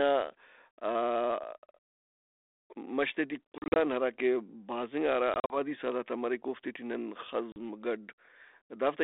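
Speech over a G.726 ADPCM call suffers packet loss on an ADPCM call: audio dropped at 3.52–3.77 s (140 ms in short gaps), 5.34–5.57 s (100 ms) and 7.52–7.57 s, and the decoder's predictor lost track. Hard silent holes follow, with slightly distorted recovery into "آن ہراکہ بھازِنگا" and "سہدارت آ مریک اوفتے".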